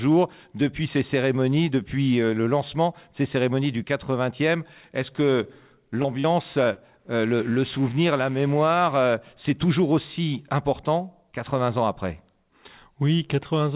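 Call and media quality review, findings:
Short concealed packet loss at 6.02, 6.20 and 6.74 s: brief smears lasting 40 to 60 ms, where the jitter buffer's concealment extended the preceding sound across roughly 20 to 40 ms of missing audio.

Mains buzz from 7.19 to 9.14 s: a steady raspy buzz on a 60 Hz fundamental, with harmonics reaching up the band, roughly 25 dB below the signal. The likely cause is switching spikes from a dimmer, rectifier or unshielded input entering the capture chain. Band-limited to 4 kHz, consistent with a G.711 call path.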